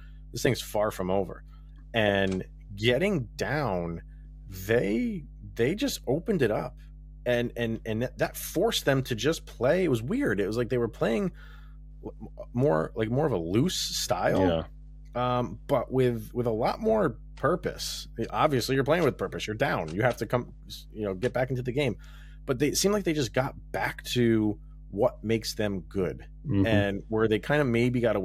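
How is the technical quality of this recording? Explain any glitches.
The recording is compromised by one fault present for its full length: mains hum. A steady 50 Hz tone with low harmonics sits roughly 20 dB below the speech, consistent with a ground loop or nearby transformer.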